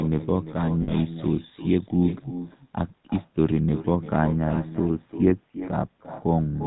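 Echo with no canceller runs throughout: the far end's loudspeaker feeds its microphone, returning every phrase roughly 0.4 s later, about 12 dB quieter and thin.

GSM full-rate codec damage is also constant. Pulse-driven vocal-tract modelling, consistent with 13 kbps coding, leaves a gravelly, buzzy roughness, with nothing above 4 kHz.

Lost GSM frames hit from 0.82 to 0.93 s. About 60 ms of data was replaced by repeats of the last good frame, which briefly holds the sound as a rough, metallic ring.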